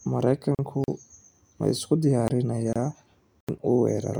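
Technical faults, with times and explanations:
0.55–0.59 s and 2.73–2.76 s, gap at a join of encoded pieces: the speech stops for about 40 ms and then 26 ms before resuming where it left off. Separately encoded segments were joined with their encoder start delay and last-frame padding left in. On a spectrogram each shows as a narrow vertical band of near-silence with slightly blurred edges from codec smearing. The waveform drops to a low floor rather than a hard flat line.
0.84–0.88 s, 2.28–2.30 s (just after "ma isku") and 3.41–3.49 s, block of digital silence: runs of 40 ms, 20 ms and 80 ms where the audio was replaced by silence, cutting out and back with no fade. This points to an output buffer not filled in time. The waveform shows near-flat stretches with abrupt vertical edges. On a spectrogram each is a sharp-edged black gap.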